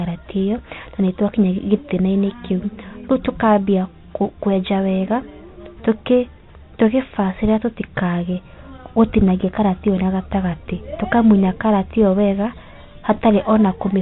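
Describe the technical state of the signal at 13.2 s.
At 13.2 s the sound is still carried by the Bluetooth CVSD headset codec, whose one-bit up-or-down coding with an adapting step leaves nothing above 4 kHz, scratchy sibilants and a granular hiss. Unlike an ordinary low-pass filter, it also smears loud high content, consistent with a 64 kbps headset link.

Right up to that moment, from 13.14 to 13.20 s, bit errors on the Bluetooth voice link add a brief rushing crackle, pointing to a rate of roughly half a percent. Because each flipped bit nudges the waveform only slightly and its effect decays, there are no sharp clicks or dropouts as with packet loss.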